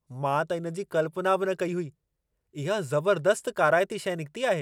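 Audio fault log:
Nothing to log here, as the speech comes through with no faults to report.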